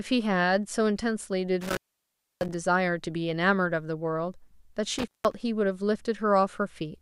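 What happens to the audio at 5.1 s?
At 5.1 s the speech drops out abruptly, with a burst of crackle as it cuts and again as it returns, and a faint hiss fills the gap. This is an intermittent contact spanning roughly 4.99 to 5.34 s: a loose cable or plug briefly loses connection, and the signal is fully open for about 173 ms in that window. The scratchy bursts at either edge come from the contact breaking and remaking.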